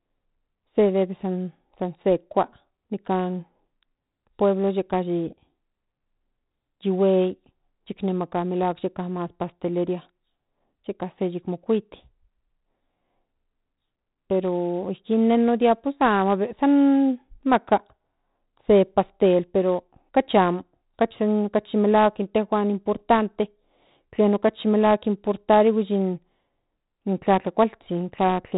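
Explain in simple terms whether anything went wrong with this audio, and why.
The speech was stored with 4-bit ADPCM compression throughout, which records each sample as a rough 16-level step from a guess. That coarse stepping leaves a gritty hiss on every loud sound, and nothing above 3.9 kHz remains, so it sounds dull.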